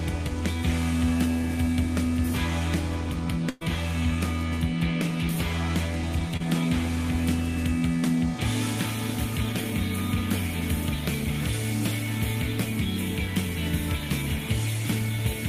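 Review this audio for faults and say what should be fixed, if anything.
At 3.49–3.63 s, a burst of packet loss drops about 120 ms. The receiver stretches the preceding sound for about 114 ms and lets it fade, so the spectrogram shows frozen, fading bands rather than silence.

At 6.37–6.46 s, short concealed packet loss covers a 20 ms hole with about 29 ms of extrapolated sound and trims 12 ms during blending. On the waveform this appears as a brief smeared patch.

A deeper jitter buffer and forward error correction on the network path would prevent both faults.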